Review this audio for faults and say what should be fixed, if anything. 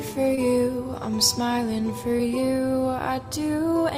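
A brief smear and wobble in the sound at 0.35 to 0.39 s and again at 2.17 to 2.21 s is short concealed packet loss. In each case about 20 ms of audio arrived too late for the decoder, so the receiver synthesised a replacement by extending the preceding sound, about 15 ms of fill the first time and 21 ms the second, then crossfaded back into the real signal. A larger jitter buffer, forward error correction or a more stable network path would stop these gaps.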